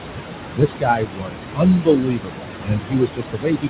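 Throughout, the background sinks and swells. These are noise suppressor artifacts: the suppressor pulls the room noise, which sits only about 8 dB under the speech, down by about 21 dB frame by frame. From 0.01 to 0.24 s, roughly a tenth of a second of speech turns faint and swallowed, and the same happens again from 0.56 s to the end. This is speech cut by the noise suppressor, which mistook soft parts of the speech for noise and lowered them by up to about 22 dB.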